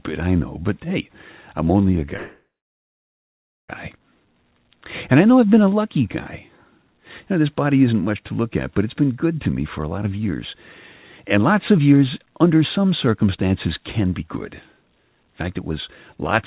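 Speech over a narrowband call, with nothing above 4 kHz (fitting G.711 A-law at 64 kbps), stalls at 2.16 s right after "hey I'm only a": the last sound smears into a fading buzz, drops to silence for about 1.2 s, and picks up again at 3.71 s exactly where it left off. Nothing is lost, but 1.5 s of delay is added. This is a call audio freeze, most likely from packets held up in transit so the jitter buffer ran dry and the receiver filled the wait. Later the talking turns rushed, at the same pitch, from 9.79 to 10.20 s just after "been good to me" (about 14% fast), then from 11.36 to 14.28 s and 14.72 to 15.71 s (about 9% fast). These are jitter buffer speed-ups: with too much audio queued, the receiver trimmed out short pitch-period slices to catch up, roughly 70 ms in the first stretch, around 300 ms in the second and about 100 ms in the third.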